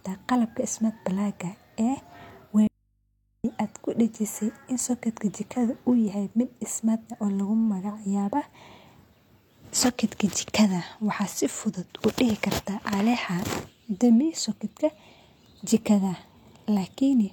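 The feed likely broke with the input still live, causing an audio dropout to a faint residue: from 2.67 to 3.44 s, speech cuts abruptly to faint hum.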